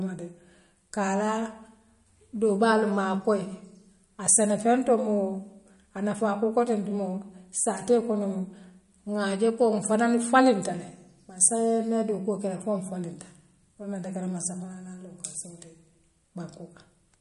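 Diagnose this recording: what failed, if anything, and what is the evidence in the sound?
The codec stage is the likely culprit: the speech shows the marks of MP3 compression at a starved bitrate, with plainly audible damage throughout. Nothing survives above 11.2 kHz, where the encoder has cut the treble to save bits, so sibilants sound dull and clipped at the top. Weak frequency lines drop in and out from frame to frame, giving a watery, swirling texture. Consonant attacks smear, which fits a rate around 48 kbps.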